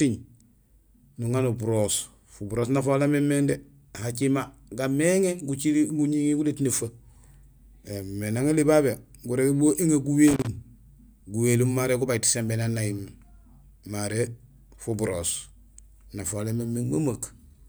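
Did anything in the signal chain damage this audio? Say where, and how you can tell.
Yes. Loose connector crackle in the analogue wiring: an irregular scratchy burst from 10.27 to 10.47 s as a worn contact intermittently broke, chopping the speech signal.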